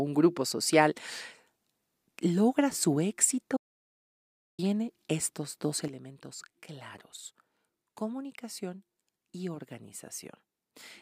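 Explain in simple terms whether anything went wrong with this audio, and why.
At 3.57 seconds the speech cuts out completely for about a second, returning at 4.59 s. The gap is dead silence, with no background hiss at all. This is an audio dropout to silence, likely caused by the input briefly disconnecting while the recording kept going.

At 5.88 seconds the whole recording suddenly becomes noticeably quieter, voice and background together, and stays that way to the end. This is a sudden gain jump, likely a volume setting that changed instantly instead of being faded smoothly.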